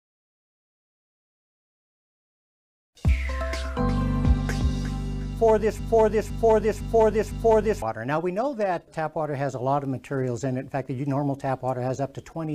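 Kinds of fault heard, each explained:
Broken-record loop: from 5.79 s to 7.82 s, a fragment about 0.51 s long plays four times in a row, each pass identical and joined straight onto the next, so the sound sticks and stutters rhythmically instead of moving on. This likely comes from the player, encoder or stream stalling and resending the last piece it held. Whatever audio belonged in those two seconds never arrives, and playback resumes only after the repeats end.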